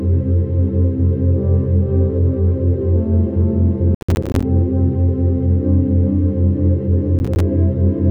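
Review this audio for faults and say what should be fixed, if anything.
Processor overload crackle at 3.95–4.43 s and 7.19–7.40 s: repeated missed buffer deadlines drop short stretches of silence, consistent with buffers around 10 ms. Increase the buffer size or reduce processing load.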